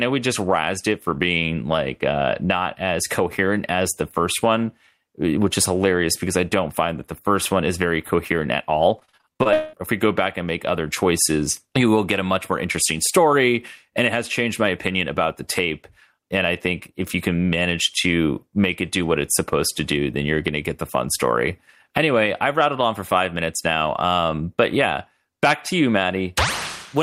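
From 8.99 to 9.75 s, repeated packet loss produces choppy, robotic speech. Gaps up to 0.2 s recur, and about half the stretch is patched sound, unlike a single dropout.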